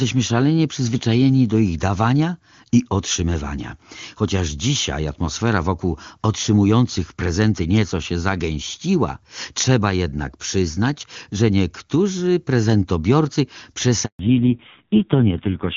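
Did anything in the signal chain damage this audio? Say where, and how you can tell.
Yes. A handover gap at the network stage hits at 14.05 s, just after "przyznać że niektórzy prezentobiorcy". The speech cuts out for 140 ms while the call switches networks. Unlike a dropout or clipping, it is a clean silence followed by changed quality.

A fallback to narrowband in the codec follows from 14.19 s to the end. It moves from HD Voice at 23.85 kbit/s to AMR-NB at 5.9 kbit/s, and nothing remains above 4 kHz. The voice turns dull and rough, which sets it apart from a simple low-pass filter.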